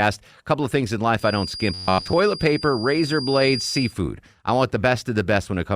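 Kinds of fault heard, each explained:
Feedback whistle: The likely cause is a loudspeaker-to-microphone loop sitting just at the edge of feedback, so one frequency keeps circulating without building up. Here it is a thin tone at 4.8 kHz, about 10 dB below the speech, entering just after "couple of things in" at 1.15 s and lasting until 3.95 s, just before "I want". Throughout that stretch it swells and fades slowly in level behind the talker.
Robotic sound from repeated short buffers: New audio was likely arriving too slowly, so playback looped a short slice over and over while most of the real signal, roughly two thirds or more, was skipped. The repeat rate imposes a fixed 93.8 Hz buzz on the voice, which fits slices of about 10.7 ms. From 1.74 to 2.13 s the speech turns rigid and metallic, only loosely following the words, while the whistle continues underneath.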